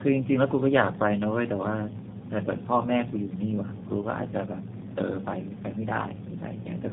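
Speech throughout sounds rough, muffled and warbly, with nothing above about 3.7 kHz. This is tandem speech coding: two low-rate speech codecs in a row, which fits AMR-NB followed by G.729A across a G.711 link, each recoding the previous one's degraded output.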